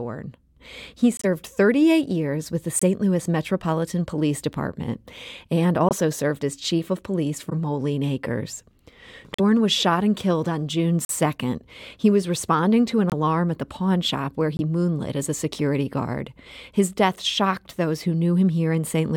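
Corrupt frame muted gaps come first, at 1.17–1.25 s, 2.79–2.83 s after "years with the", and 5.89–5.93 s before "served as". Damaged compressed frames were rejected and replaced with silence. Each hole cuts in abruptly, one to three frames long. Timing holds.

At 7.49–7.53 s comes a corrupt frame decoded. Flipped bits were played anyway, so energy landed at wrong frequencies. It is a short burst peaking near -15 dBFS, lasting about one frame.

More muted gaps follow at 9.34–9.40 s, 11.05–11.11 s, 13.10–13.14 s between "was responding to an" and "at the pawn shop", and 14.57–14.60 s.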